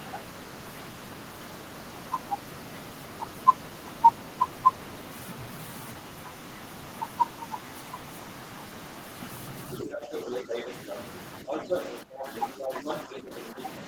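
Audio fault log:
9.79–11.01 s, other side's voice leaking through: the echo canceller likely failed to remove the far end's loudspeaker sound from the microphone, so a second voice comes through at roughly the same loudness as the talker, competing with them rather than sitting underneath.
9.8–10.7 s, speech suppressed in double talk: with both sides talking at once, the canceller likely could not tell its own talker from the echo and turned everything down. The talker's voice dips by as much as about 10 dB for roughly half a second in all.
11.48–13.59 s, other side's voice leaking through: the far-end voice, likely not cancelled, returns for a longer stretch, again about as loud as the talker, so two voices overlap for roughly two seconds.
11.43–13.59 s, speech suppressed in double talk: the same overlap likely drives the canceller to attenuate the talker along with the echo, pulling their voice down by up to about 10 dB across roughly a second in pieces.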